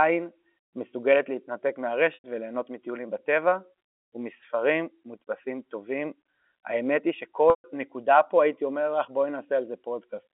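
At 2.14 to 2.24 s and again at 7.5 to 7.64 s, packet loss with pitch repetition bridges gaps of 100 ms and 140 ms, which points to 20 ms packets. In each gap the receiver loops the last pitch period of the speech and fades it down, so the sound becomes a held, slightly buzzy tone that fades into silence before the speech returns with a short cross-fade. The second, longer gap leaves a longer silence after the fade. The G.711 telephone coding limits the speech to the 250 to 3400 Hz line band.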